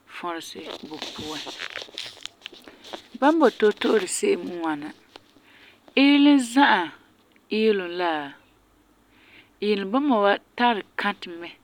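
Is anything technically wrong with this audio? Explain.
No, nothing technically wrong can be heard here.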